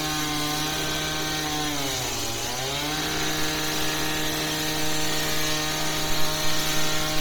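From start to finish the sound has a grainy, hissy sheen on its upper detail, with that top band sounding more like shaped noise than real content. That's most likely Bluetooth LC3 compression, squeezed hard at a low bitrate, something like 32 kbps. With too few bits to go round, the codec throws away much of the high spectrum and fills the gaps with noise. The artefacts come and go in a way that fits 10 ms frames, and nothing reaches above 20.1 kHz.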